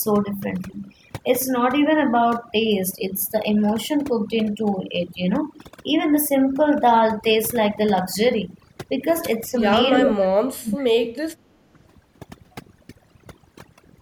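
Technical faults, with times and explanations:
Throughout, overdone noise removal: bands near the noise estimate are pushed down hard, so the background drops and breaks up into twinkling specks. A spectrogram shows scattered isolated dots between words and ragged, gappy upper harmonics.
9.49–9.61 s, 10.01–11.07 s and 11.38–11.43 s, speech suppressed in double talk: the speech dips, most deeply for about a second in the middle stretch (around 35 dB), and more briefly elsewhere, likely an echo canceller ducking during simultaneous talk. The waveform shows sudden envelope notches, and the spectrogram shows fading bands.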